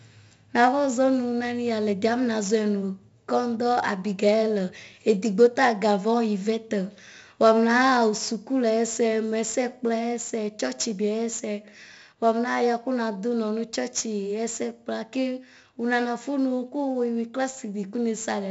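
A gritty hiss rides on every loud syllable, with nothing above about 7.7 kHz: heavy 4-bit ADPCM compression throughout, at a bitrate that points to 64 kbps.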